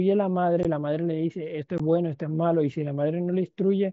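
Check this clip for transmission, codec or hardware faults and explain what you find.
Two brief dropouts from unconcealed Bluetooth headset packet loss, at 0.63 s and 1.78 s. Each gap of about 15 ms, consistent with two lost 7.5 ms mSBC frames, is filled with silence or an idle pattern instead of concealment, so the speech cuts out with hard edges that can click before resuming.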